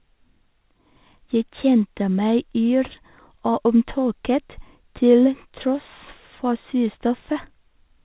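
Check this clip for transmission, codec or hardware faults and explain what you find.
No transmission, codec or hardware faults turn up in this speech clip.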